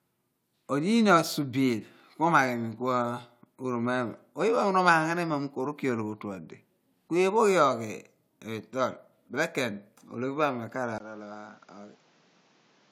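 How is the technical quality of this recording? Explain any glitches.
One glitch stands out, near the end of the speech. At 10.98 s the sound drops out for about 20 ms. It then returns duller and about 10 dB quieter, and stays that way until the clip ends. Nothing is heard above 7.6 kHz, and a new background noise sits roughly 30 dB under the speech. This is likely an input switched to a poorer device. A narrower band, lower gain and a different noise floor all fit a second microphone taking over.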